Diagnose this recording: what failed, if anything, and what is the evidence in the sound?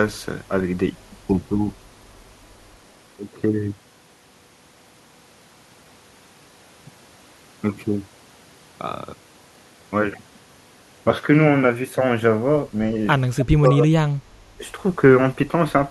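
Short scraps of a delayed copy of the speech appear at 13.4–13.45 s and 13.65–13.7 s, the first about 10 dB below the talker and the second far fainter. Both sit 309 ms behind the original, and that fixed offset separates this echo leak from room reverberation. The likely cause is in call processing: a loudspeaker-side echo canceller let part of its microphone pickup through.

The speech is pulled down while the other side talks, within 13.41–14.07 s and again at 14.35–14.64 s, dropping by roughly 20 to 25 dB in pieces. This is speech suppressed in double talk, likely the same canceller attenuating its own talker along with the loudspeaker echo.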